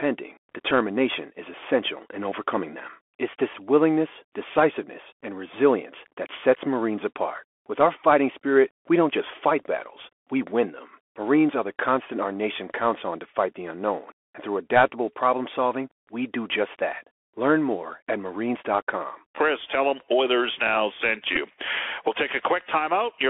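Speech heard through a Bluetooth CVSD headset codec. The band sits between 300 Hz and 3.4 kHz. The one-bit coder's damage is plainly audible: scratchy sibilants, granular hiss, and distortion where loud high sounds outpace its adapting step. A Bluetooth headset packet was repeated three times: a brief tick at 0.71 s. A short buzzy tick at 9.63 s, between "spirit we don't just" and "battles we win them", lasting about 7.5 ms. Another at 21.36 s, about 11 ms long. Each is the decoder replaying the previous packet after losses.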